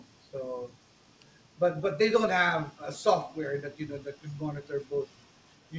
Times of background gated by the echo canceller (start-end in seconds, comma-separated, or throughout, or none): none